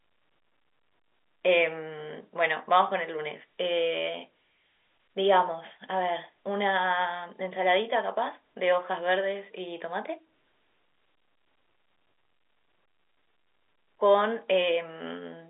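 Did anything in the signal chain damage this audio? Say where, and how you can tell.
No, nothing in the chain damages this speech: it sits inside a 300 Hz to 3.6 kHz telephone band with nothing above about 3.8 kHz, which is the expected result of G.711 telephone coding.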